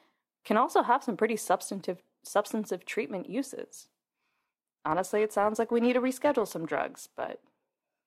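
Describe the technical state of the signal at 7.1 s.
At 7.1 s the speech carries a rough, metallic edge that is most obvious on bright, high-frequency sounds. This is periodic clock jitter, running from 3.77 s, just after "pretty substantive substantive treatment", to the end. The converter's clock is wobbling at around 1 kHz, which places sidebands about that far either side of every component.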